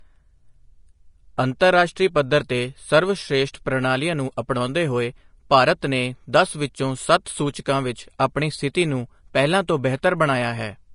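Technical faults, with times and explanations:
throughout: Vorbis compression, likely. Nothing reaches above 10.5 kHz, and the remaining treble sounds grainy and hissy because fine detail is quantised so coarsely it turns into noise. The plainly audible damage fits a low rate near 34 kbps, unlike a plain low-pass filter, which sounds dull but clean.
1.6 s: pre-echo. A brief hiss of about 12 ms arrives just ahead of a sharp attack, because quantisation noise sized for the loud onset spreads across the whole transform block into the quiet moment before it. Unlike a click, it is a soft smear leading into the onset rather than a single tick.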